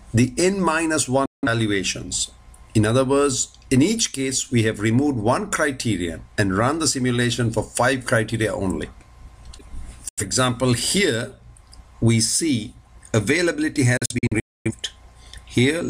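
A digital broadcast dropout hits three times. Each time the receiver stops getting decodable frames and mutes within about 3 ms, so the sound snaps off and later returns mid-programme with the gap's content gone. At 1.26 to 1.47 s it drops about 0.17 s, consistent with four lost frames. At 10.09 to 10.23 s the hole is 85 ms. From 13.97 to 14.72 s it breaks into several short holes totalling about 0.43 s, the longest 0.26 s.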